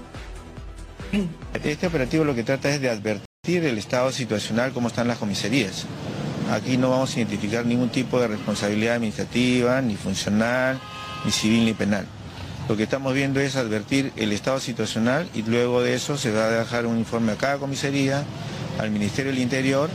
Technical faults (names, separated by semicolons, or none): rebuffering stall